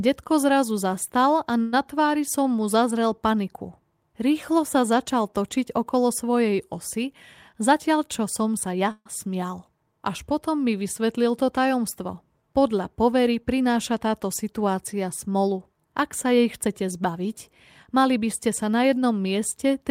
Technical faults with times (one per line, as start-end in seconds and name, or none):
1.61-1.74 call audio freeze
7.53-8.88 jitter buffer speed-up
8.91-9.07 call audio freeze
13.22-14.07 jitter buffer speed-up
16.31-18.27 jitter buffer speed-up